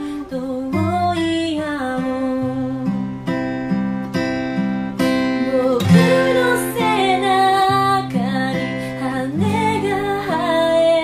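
Nothing stood out on listening to this audio.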